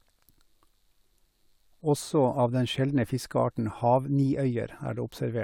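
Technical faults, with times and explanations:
No technical faults are heard in this speech clip.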